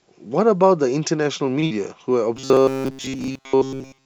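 At 1.60 to 1.64 s, a late packet left the jitter buffer empty, causing a short stall. The last sound is held about 26 ms too long before resuming, with nothing lost.

Just after, at 1.66 to 1.72 s, 40 ms never reached the decoder. This short concealed packet loss was bridged by extending the previous sound, which gives a brief smear or wobble.

From 2.37 s to the end, the sound becomes robotic from repeated short buffers. The cause is likely audio arriving too seldom, so a tiny segment is looped in place of real audio. That gives a rigid, metallic buzz at 134 Hz throughout, which fits a buffer of roughly 7.5 ms. The G.722 call path also leaves nothing above 8 kHz.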